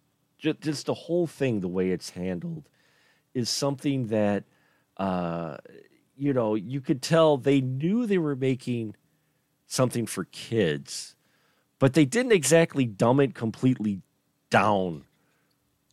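No audible faults occur anywhere in the recording.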